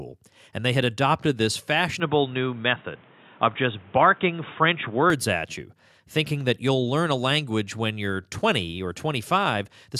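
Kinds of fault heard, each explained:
Input switched to a poorer device: From 2.0 to 5.1 s the sound turns dull and boxy, with nothing above 3.8 kHz and a new, faint noise floor, then clears again, with no gap and little level change, likely from the recording switching to a narrower-band input device and back.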